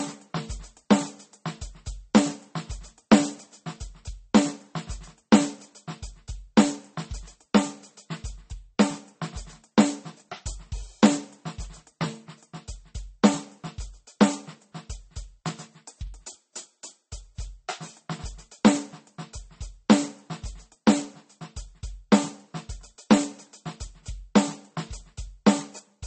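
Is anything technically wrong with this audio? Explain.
Yes. Throughout the music, this is likely transcoding between lossy codecs: a low-rate MP3 encode, roughly 32 kbit/s, re-encoded as Vorbis near 36 kbit/s. Nothing remains above 8.4 kHz, and smeared, swirly MP3 artefacts sit under a second layer of Vorbis graininess.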